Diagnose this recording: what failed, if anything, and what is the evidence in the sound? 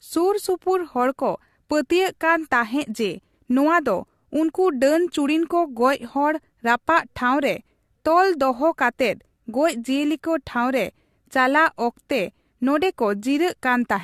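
Codec stage. Across the whole speech clip the sound is swirly, smeared and hollow, attacks blur, and nothing reaches above 14.2 kHz. That fits generation loss, likely from a few AAC-LC passes near 64 kbit/s, each requantising on a shifted frame grid so artefacts accumulate.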